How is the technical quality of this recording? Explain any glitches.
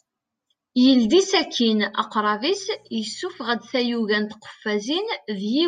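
The recording has one glitch, a mains buzz. From 2.47 to 4.13 s a faint, steady, raspy buzz sits well under the speech. Switching spikes at twice the 60 Hz mains rate leak in, spreading harmonics up to several kHz.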